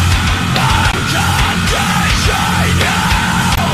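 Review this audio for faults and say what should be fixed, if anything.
There's damaged data in the compressed stream in two spots, at 0.90 to 0.96 s and 3.54 to 3.58 s. Corrupted bytes trip up the decoder, which loses frame sync and hunts for the next header, leaving short blips in the sound. To prevent it, verify file checksums after transfer and re-pull the stream from a clean source.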